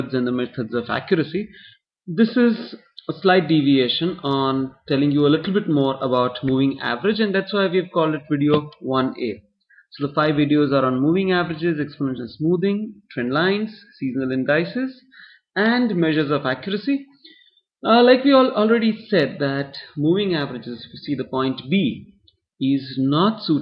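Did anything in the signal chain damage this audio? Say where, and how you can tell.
No, nothing in the chain has audibly damaged this audio, and no stage leaves a fault to point to.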